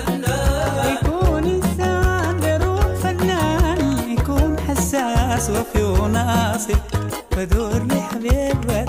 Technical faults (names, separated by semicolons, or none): none